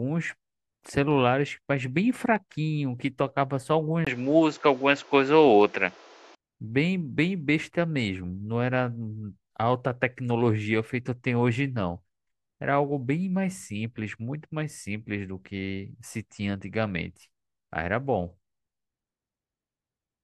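At 4.05 s, after a 20 ms gap, the speech turns dull and boxy. Nothing above 7.6 kHz remains, the level shifts by around 5 dB, and new noise sits roughly 30 dB down. It clears at 6.37 s. The likely cause is the input switched to a poorer device.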